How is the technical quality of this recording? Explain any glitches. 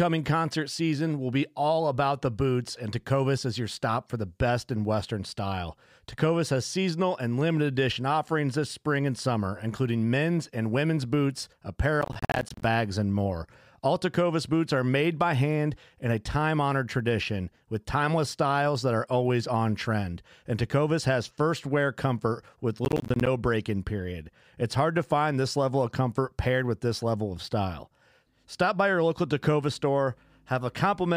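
The recording has two bursts of processor overload crackle in the speech, at 12.01 to 12.64 s and at 22.85 to 23.27 s. The processor fell behind and missed a run of audio buffer deadlines, each dropping a short slice of sound, on the order of 10 ms, to silence. The first burst is longer and denser, with dozens of hard-edged gaps. The second is shorter, with perhaps a dozen or so. Both sound like gritty tearing over the speech that stops when the load clears.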